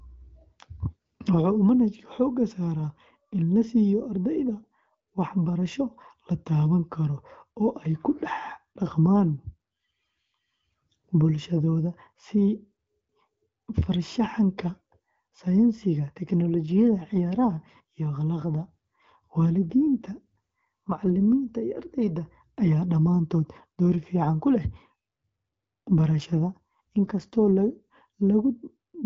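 From 18.58 to 21.21 s, and again from 25.88 to 27.49 s, the speech turns rougher and more synthetic, then recovers. These are AMR rate drops: a weak radio link makes the wideband codec trade bits for error protection, and the grit points to a step down from around 12.65 to 8.85 kbit/s. Unlike a fallback to narrowband, the bandwidth holds and nothing drops out; only the texture coarsens.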